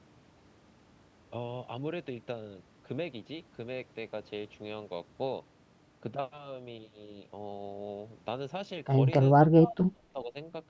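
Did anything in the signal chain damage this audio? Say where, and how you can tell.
Yes. Between 9.41 and 10.36 s the speech dips by up to about 25 dB and breaks into pieces, roughly 0.7 s in total. This is speech suppressed in double talk, likely in the call processing. The echo canceller mistook the talker for loudspeaker echo and turned it down.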